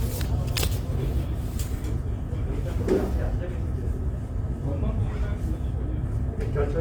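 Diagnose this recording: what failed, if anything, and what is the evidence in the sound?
Opus compression, throughout, at the codec stage: tones sound grainy and rough because starved bands are noise-filled, likely from music-mode encoding near 24 kbps; bandwidth still reaches 20.2 kHz.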